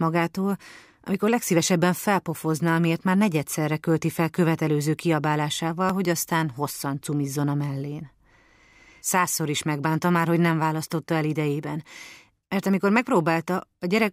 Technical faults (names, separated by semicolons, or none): dropped buffer (overrun)